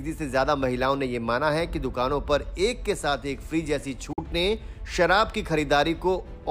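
At 4.13 s the sound cuts out for about 60 ms, resuming at 4.19 s as if it had played on. This is likely a Bluetooth dropout, late packets discarded at the headphones. The waveform shows a flat gap; the spectrogram shows a clean vertical blank.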